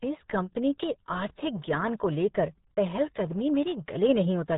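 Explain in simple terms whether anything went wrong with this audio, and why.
Yes, something went wrong. The whole speech clip went through the RealAudio 14.4 codec, an old dial-up format. It squeezes sound very hard. Nothing above about 3.8 kHz survives. So the speech sounds muffled and gargly from start to finish.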